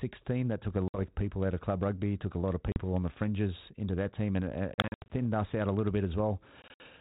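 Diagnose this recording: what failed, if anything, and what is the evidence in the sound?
Network: packet loss on an ADPCM call at 0.88, 2.72, 4.74 and 6.62 s. Hard silent gaps, then slightly distorted speech while the decoder's predictor resynchronises.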